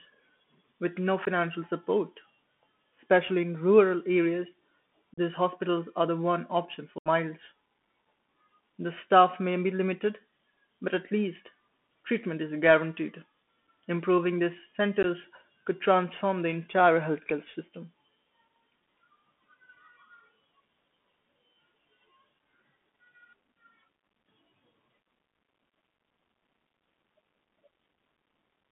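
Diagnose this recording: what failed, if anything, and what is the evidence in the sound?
The codec stage is the main culprit: this speech went through the Bluetooth CVSD headset codec, and the damage is plainly audible. Everything sits in a narrow 200 Hz to 3.4 kHz band, s sounds come out scratchy, and a grainy hiss rides under the voice. That's the one-bit up/down delta scheme at work, with its adaptive step failing to keep up with fast high-frequency energy. The sound fits a 64 kbps CVSD headset link.

On top of that there's unconcealed Bluetooth headset packet loss on the radio hop between headset and phone. You get a tiny 15 ms hole at 1.25 s right after "with no", a 37.5 ms gap from 5.14 to 5.19 s just before "hospitals are the one", a longer 75 ms dropout from 6.98 to 7.08 s after "the one option for", and another 15 ms hole from 15.03 to 15.05 s. Nothing fills these gaps, so they cut off with hard edges.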